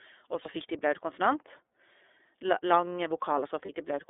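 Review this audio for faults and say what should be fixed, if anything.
iLBC codec coding runs through the whole clip: the speech is confined to roughly 300 Hz to 3.5 kHz, and each 30 ms frame's excitation is coded independently, giving a plainly audible rough, synthetic edge that fits iLBC's 13.33 kbps mode.

Lost iLBC frames appear at 0.41 to 0.49 s and 3.65 to 3.70 s. Each gap is filled by the decoder repeating the last pitch cycle blended with noise, heard as a brief buzzy, held vowel. The 30 ms length points to one lost frame each time, and the speech recovers immediately afterward.

To prevent this, use a wideband codec instead of iLBC, and reduce packet loss with forward error correction or redundant packets on the network path.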